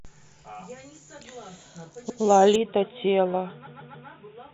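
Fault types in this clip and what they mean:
Repeated frames: Stored compressed frames were played again, causing a stutter. At 2.09 s a 109 ms block repeats once (adding 119 ms); at 3.66 s a 139 ms block plays three extra times (adding 418 ms). The waveform shows identical shapes repeated back to back, and the spectrogram shows copied patches with seams between them.
Input switched to a poorer device: From 2.56 s the sound turns dull and narrow, most likely because recording moved to a lesser input. There is no gap and level stays steady. The spectrogram shows nothing above 3.8 kHz from that point, with a faint new noise floor about 40 dB down.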